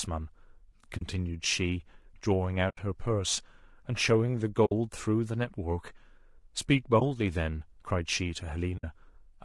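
A speech recording that has likely passed through low-delay AAC compression, the AAC-ELD type used on video calls, at a rate that fits roughly 32 kbps. At this low bitrate the voice sounds plainly rough and grainy throughout, with noise between harmonics and a thin, synthetic top band. AAC frame loss with muting then punches soft-edged holes, and one brief dip, where the decoder zeroed missing frames: 0.97 to 1.02 s, 2.69 to 2.78 s, 4.65 to 4.72 s, 6.99 to 7.02 s and 8.77 to 8.84 s, each a 20 to 80 ms fade-out and fade-in.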